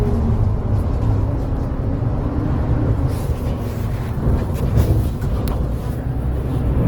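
Throughout, the audio sounds grainy, rough and noisy rather than swirly, with content up to about 20 kHz; this is likely Opus compression in music mode, fitting roughly 16 kbps.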